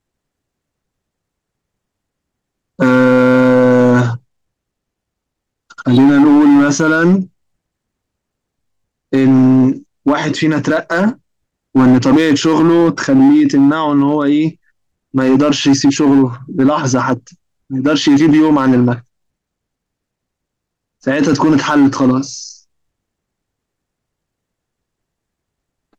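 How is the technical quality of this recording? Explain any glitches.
The recording is hard clipped from start to finish. The speech drives the signal about 8 dB past what the stage can pass, flattening roughly one sample in twenty and adding harsh upper harmonics that crackle on every peak.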